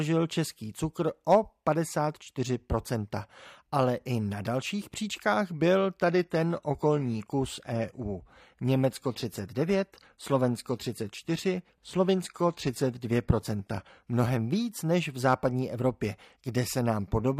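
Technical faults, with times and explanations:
6.06 to 14.06 s, adaptive stream at a lower bitrate: the connection slowed, so the player switched mid-stream to a lower-bitrate version of the speech and then switched back, with no gap at either point. For those eight seconds the quality drops suddenly. Nothing above 14.9 kHz remains, and codec artefacts rise. This points to a change from roughly 96 kbit/s AAC to a low-rate HE-AAC stream near 24 kbit/s.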